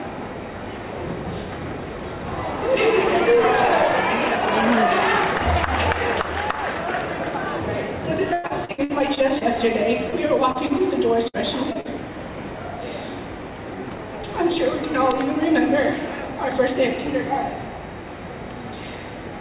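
Repeated packet loss hits twice. From 8.33 to 9.44 s, audio packets keep going missing, and each hole is bridged by stretching the last received sound, so about a third of that stretch is concealment. The result is choppy sound with pieces missing and gaps up to 106 ms. A second, lighter burst runs from 10.10 to 12.12 s, with gaps up to 58 ms. Throughout, nothing reaches above 4 kHz, which fits a G.711 mu-law call path.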